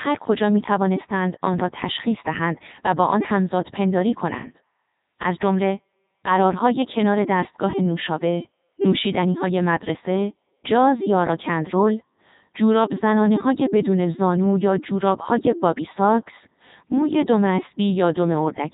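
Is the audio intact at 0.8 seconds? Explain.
No. At 0.8 seconds, as throughout the clip, the speech sounds robotic and buzzy, with nothing above about 3.8 kHz. This is heavy Codec 2 vocoder damage, fitting its 3.2 kbit/s mode: the decoder rebuilds the voice from sine waves using pitch, voicing, energy and envelope, discarding the original waveform.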